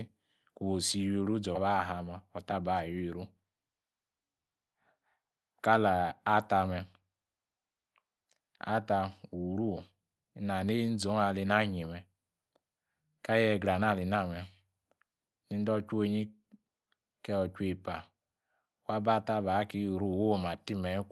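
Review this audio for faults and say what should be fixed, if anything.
At 1.55 s there is a skip ahead. A stretch of incoming speech, around 0.4 s, was dropped while later audio was already queued, so playback moved forward with no filler. The speech on either side of the missing stretch is butted together almost directly, and the listener hears an abrupt jump with part of the talk simply gone. To prevent it, size the jitter buffer so it can absorb bursts without discarding queued audio, and use concealment instead of outright drops.

From 2.13 to 2.71 s there is a jitter buffer speed-up. Right after the skip, the buffer was holding more audio than its target, so the receiver trimmed short pitch-period pieces again and again, removing about 50 ms in total. Over that half-second the speech plays at about 108% speed with unchanged pitch, which sounds rushed through the Opus call path and its roughly 12 kHz bandwidth. 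To prevent it, smooth network delivery so packets don't arrive in bunches, and let the buffer shrink its delay more gradually.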